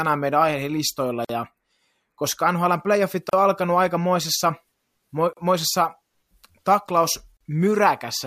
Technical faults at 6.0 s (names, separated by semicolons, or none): none